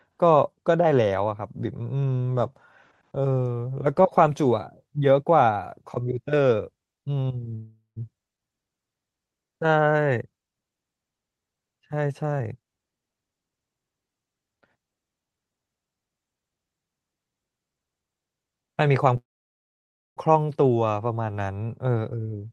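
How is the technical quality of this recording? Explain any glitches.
The recording has two call audio freezes and two jitter buffer speed-ups, heard over call-codec sound with content above 12 kHz cut off.

Call audio freeze at 7.55–7.98 s and 19.17–20.19 s. Delayed packets likely emptied the jitter buffer. The last sound continues as a fading buzz, then silence. The first gap adds 0.41 s and ends in 130 ms of silence. The second adds 0.99 s, almost all of it silent. Nothing is lost. The audio simply resumes later.

Jitter buffer speed-up at 12.22–13.65 s and 21.66–22.47 s. The receiver cut pitch-period slices to reduce the built-up delay. Speech runs at 128% speed, losing about 0.4 s, then at 110%, losing about 0.1 s. Pitch stays the same, but it sounds hurried.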